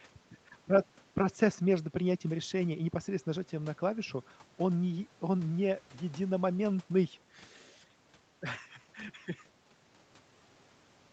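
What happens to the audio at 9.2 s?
Nothing goes wrong at 9.2 s: the speech there passes through intact, carried by the call path's band-limited sound with nothing above about 8 kHz, which is normal for this kind of call.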